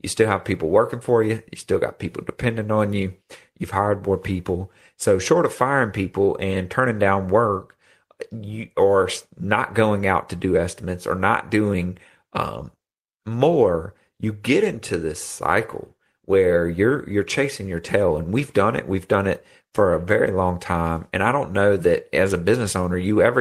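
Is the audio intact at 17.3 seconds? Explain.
Yes, at 17.3 seconds the speech plays through intact, with no audible fault at that moment.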